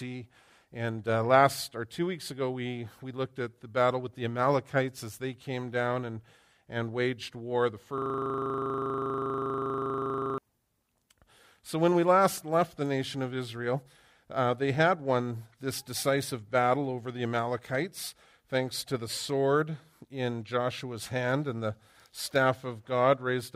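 From 7.98 to 10.38 s the audio falls into a system hang loop: the host or driver froze while the sound hardware kept replaying its ring buffer, so one 40 ms slice repeats exactly, roughly 60 times. At 25 Hz this is a rough, rattling buzz rather than a machine-gun stutter. Unlike a dropout or a random glitch, every cycle is identical and the pitch never drifts, and normal sound resumes abruptly once the system recovers.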